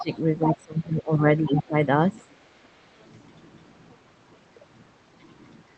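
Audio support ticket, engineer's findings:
Speech suppressed in double talk at 0.0–0.1 s, 0.45–1.75 s and 2.22–2.42 s. Level dips by about 15 dB, about 20 dB in the longest stretch, roughly 1.3 s in total. Likely echo canceller ducking near-end speech while the far end talks.

Other side's voice leaking through at 0.0–0.18 s and 1.6–1.68 s, about 15 dB under the talker, plus a faint trace at 3.0–3.04 s, about 40 dB down. Second voice in short scraps. Likely residual loudspeaker echo the canceller missed, not the Opus call path.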